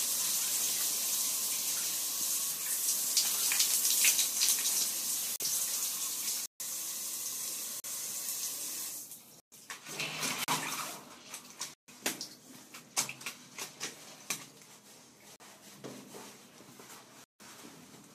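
Eight blocks of digital silence punch through the audio, at 5.36, 6.46, 7.8, 9.4, 10.44, 11.74, 15.36 and 17.24 s. The 40 ms ones (5.36, 7.8, 10.44, 15.36) come across as brief gaps, while the longer ones of roughly 120 to 160 ms open audible holes. Each time, a stretch of samples dropped to silence, as when output isn't delivered in time, so the sound snaps off and back with no fade.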